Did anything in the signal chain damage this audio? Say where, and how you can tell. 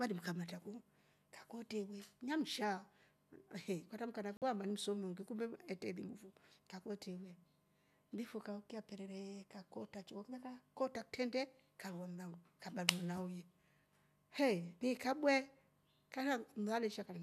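Yes. A digital broadcast dropout at 4.37 to 4.42 s cuts the speech to silence for about 48 ms, then it resumes. The receiver muted when frames failed to decode, and the gap's length fits losing a couple of frames at the decoder stage.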